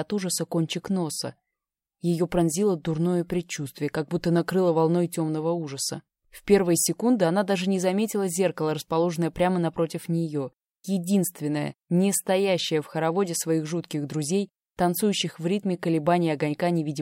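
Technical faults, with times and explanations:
Nothing stood out on listening.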